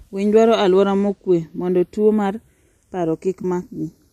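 Across the whole speech clip the two channels are drifting apart. Their devices run on slightly mismatched clocks, a few tens of parts per million, so the inter-channel delay creeps up to a fraction of a millisecond by the end. In mono this gives a slow, one-directional comb sweep, unlike an effect flanger's cycling back and forth.

From 3.42 to 3.45 s there is AAC frame loss with concealment. About 20 ms of audio went missing, which fits two lost frames of a low-delay AAC stream. The decoder patched the gap from the preceding spectrum, so it sounds like a brief smeared, phasey blur rather than a click or a hard drop to silence. The light graininess of that stream is likely the low-delay AAC compression itself.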